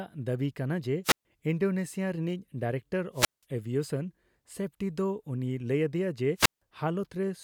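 Wireless microphone squelch dropouts occur at 1.04 to 1.25 s, 3.13 to 3.44 s and 6.36 to 6.62 s. Each time the analogue FM radio link weakens, hiss swells briefly until the receiver's squelch cuts the output, leaving a hole of near silence of about 133 ms, 178 ms and 160 ms respectively before the speech comes back as the signal recovers.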